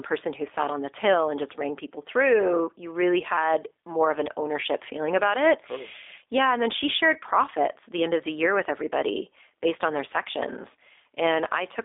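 Throughout, the speech carries G.729 codec damage: it is rebuilt from a vocal tract model with sparse pulses, fitting an 8 kbit/s stream, so it sounds rough and synthetic. Unlike simple band-limiting to 300 Hz–3.6 kHz, with nothing above 3.7 kHz, the voice itself is coarsened, not just dulled.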